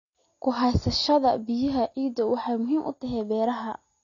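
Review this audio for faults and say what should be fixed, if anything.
Throughout the speech, nothing sounds above 6.9 kHz, and sibilants come out dull and smeared with a fizzy, warbling texture. This is likely AAC compression: the encoder discards the top band and coarsely quantises what remains, consistent with AAC-LC at around 24 kbps. Encode at 96 kbps or higher, or keep an uncompressed master for delivery.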